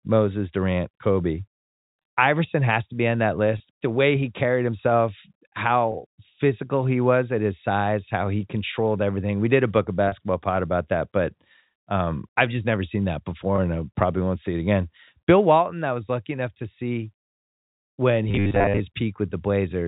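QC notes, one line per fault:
2.02–2.04 s, 3.58–3.60 s, 5.92–5.94 s, 10.08–10.12 s and 13.56–13.58 s, packet loss with pitch repetition: each spot has a brief held, slightly buzzy smear where the sound momentarily freezes on one tone. A single 20 ms packet went missing each time (40 ms, likely two packets, at 10.08 s), and the receiver bridged the hole by looping the last pitch period and fading it, so the gap is covered rather than heard as silence.
18.29–18.81 s, robotic sound from repeated short buffers: the sound turns into a rigid, metallic buzz locked at 100 Hz while still loosely tracking the speech, heard through the narrow telephone band of the G.711 line. The likely cause is audio arriving too seldom, with the software repeating a short chunk to fill time. A 100 Hz buzz fits a 10 ms buffer being replayed, and most of the real audio in that half-second is skipped.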